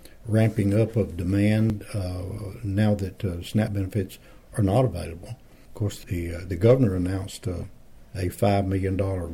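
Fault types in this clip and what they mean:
Audio missing between chunks: Brief skips occur at 1.70, 3.68 and 5.65 s, roughly two seconds apart. Each drops around 20 ms, and the sound on either side joins with no gap. The likely cause is a slice lost at each two-second chunk boundary.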